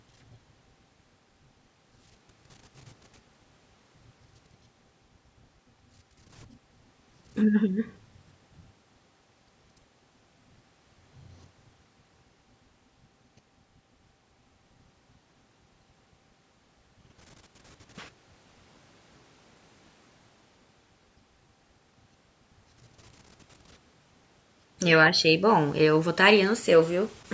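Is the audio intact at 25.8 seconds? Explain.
Yes, the speech at 25.8 seconds is intact, with only the ordinary call microphone processing audible as a lack of content above 8 kHz and trimmed lowest bass.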